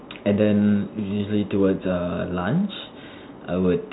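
No technical faults occur in this speech clip, which carries the narrow telephone band of G.711 coding with nothing above about 3.9 kHz.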